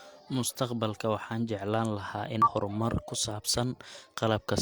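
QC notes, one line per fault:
2.42–2.48 s, damaged data in a compressed stream: right after "waxaan jeclaan lahaa in" there's a quick glitch. A bit of the encoded stream is corrupt there, so the decoder misreads those frames, loses sync and hunts for the next good frame header.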